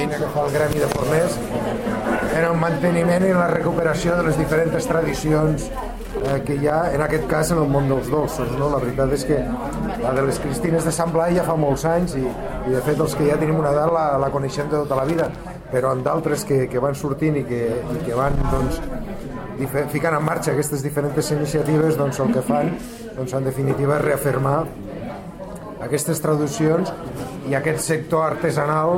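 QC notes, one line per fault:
6.06–6.34 s and 15.09–15.39 s, loose connector crackle: two short, ragged bursts of scratching and crackle, each lasting roughly 0.3 s, break into the sound and then clear. The crackle comes from a worn or dirty contact somewhere in the signal path that is making and breaking many times as it shifts. That chops the signal in an irregular pattern, and any DC on the line turns each make or break into a pop.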